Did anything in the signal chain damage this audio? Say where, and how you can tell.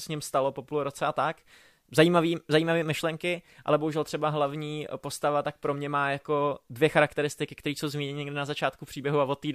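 No, nothing in the signal chain damaged this audio.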